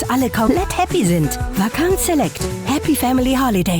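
A short piece of audio with compressed frames skipped twice: at 0.47 s it leaps ahead by around 150 ms, and at 2.43 s by around 70 ms. Whole frames, fitting a 20 ms frame size, went missing or were rejected.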